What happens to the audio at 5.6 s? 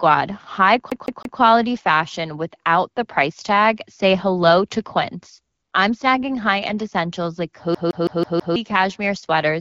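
AMR comfort noise, 5.54 to 5.72 s before "I'm snagging": speech frames stop, and smooth receiver-generated noise appears as a flat, featureless spectrogram band.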